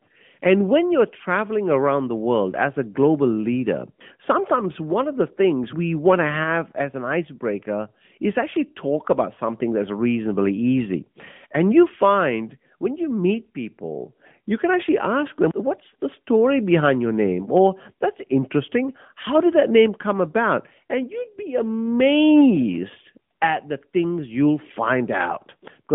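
From the first second to the last, the speech has been through the AMR narrowband mobile codec, the old 2G/3G phone coder. It squeezes the line into roughly 150 Hz to 3.5 kHz, with nothing at all above 3.6 kHz, so everything sounds boxed-in and dull. The codec rebuilds the voice from a vocal-tract model fed by sparse pulses, and the damage is plainly audible as a buzzy, synthetic edge, which fits a mid-rate mode around 10 kbps.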